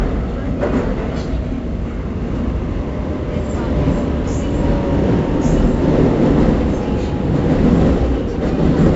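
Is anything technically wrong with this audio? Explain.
Yes. Throughout the clip, a gritty hiss rides on every loud moment, attacks sound roughened, and nothing reaches above about 7.7 kHz. This is heavy 4-bit ADPCM compression: each sample is coded as a coarse step from a prediction, and the dull top end fits a 64 kbps stream at a low sample rate.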